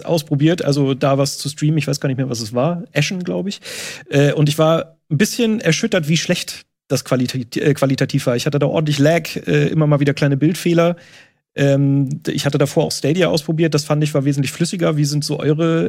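No technical faults are audible.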